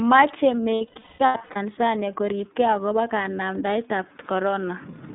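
iLBC codec throughout: the speech is squeezed into a narrowband line from 200 Hz to 3.7 kHz and coded in 30 ms frames, which fits the 13.33 kbps mode. The coding damage is plainly audible as a rough, slightly synthetic edge.

Lost iLBC frames from 0.76 to 1.57 s: about 570 ms of audio went missing in scattered gaps across 810 ms, the longest run around a fifth of a second. The decoder filled each gap with a repeated pitch cycle mixed with noise, heard as buzzy, held vowel-like sound.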